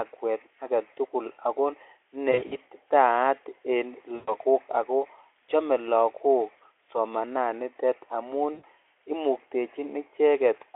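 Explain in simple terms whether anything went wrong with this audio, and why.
Three short stretches of the speech go smeared and buzzy or noisy, as if a sound were held and stretched before fading out: 2.31 to 2.55 s, 4.15 to 4.35 s, and 8.53 to 8.64 s. This is VoIP packet loss concealed by the speech codec. Chunks of the call, roughly a tenth of a second each time, never arrived, so the Speex decoder guessed the missing sound from what came just before and let it die away.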